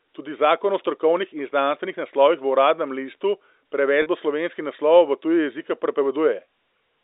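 At 4.02 to 4.06 s, packet loss with pitch repetition: about 40 ms of audio, consistent with two 20 ms packets, was bridged by repeating the last pitch period, giving a brief held buzz.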